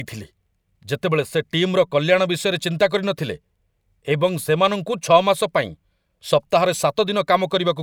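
Listening to this speech recording, nothing stood out as a technical problem at any point.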